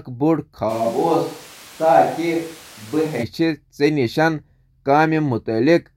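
At 0.71 s the speech suddenly turns roomy and hollow, loses its low end, drops by roughly 5 dB, and picks up background noise sitting only about 25 dB below the voice. It snaps back to the close, full sound at 3.22 s. That abrupt jump both ways is the signature of a switch to a distant microphone, likely because the close mic's signal dropped out and a farther one, such as a camera mic, took over.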